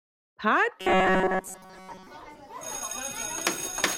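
From 0.8 s to 2.07 s the sound turns into a rigid metallic buzz pitched at 188 Hz, robotic sound from repeated short buffers. The likely cause is audio reaching the playback stage too seldom, so the software keeps looping the last fragment, about 5.3 ms long, to fill the gaps while fresh material is dropped. Around two-thirds or more of this stretch is repeated material, so the original sound survives only as a rough outline under the fixed buzz.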